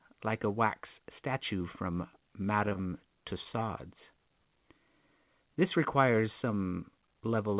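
Speech heard through a narrowband call path with nothing above 4 kHz, which fits G.711 A-law at 64 kbps. At 2.69 s there is a short concealed packet loss. About 20 ms of audio never arrived in time. The receiver extended the preceding sound to cover the gap, ending at 2.73 s. The result is a brief smear, and a little of the speech is lost. Right after, from 2.73 to 2.77 s, comes a short stall from a late packet. The jitter buffer ran dry and the delay grew by 20 ms. The receiver held the last sound for about 20 ms until the packet came. Nothing is lost, but the sound lingers slightly too long.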